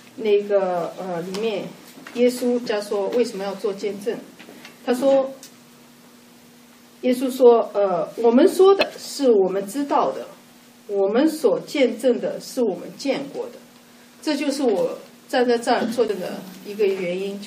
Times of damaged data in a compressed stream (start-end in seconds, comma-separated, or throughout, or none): 2.66, 4.89, 8.81, 16.08